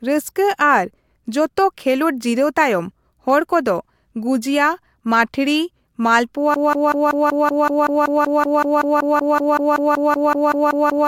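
At 6.54 s the speech gets stuck in a broken-record loop: a fragment of about 0.19 s starts repeating exactly, back to back, around 24 times, and it never lets go before the clip ends. It's a hard, stuttering chatter rather than an echo, and whatever should have been said in those last seconds is simply gone. Most likely the player or stream stalled and kept re-sending the last chunk it had buffered.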